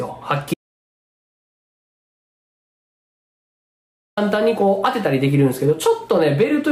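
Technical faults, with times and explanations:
0.54 to 4.17 s, audio dropout to silence: the sound stops abruptly and about 3.63 s of silence follows, with no room tone at all, before the audio resumes mid-flow just as suddenly. Silence with no room tone rather than a quiet passage means the recording chain kept running while nothing reached it, likely from a lost input such as a disconnected device, failed link or accidental mute. Whatever occurred in that span is missing.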